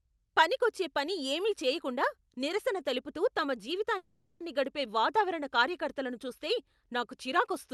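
At 3.97 to 4.43 s, a call audio freeze, likely packets stalling and draining the jitter buffer, inserts 0.43 s of fading buzz before the speech resumes intact, delayed.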